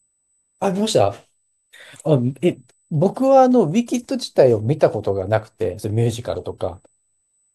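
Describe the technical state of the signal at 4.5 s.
At 4.5 s the speech carries USB whine, which runs through the whole clip. Current drawn in 125-microsecond USB microframes leaks in through power or ground. It sounds like a steady, fixed-pitch tone at 8 kHz, strongest at 16 kHz, about 45 dB below the speech.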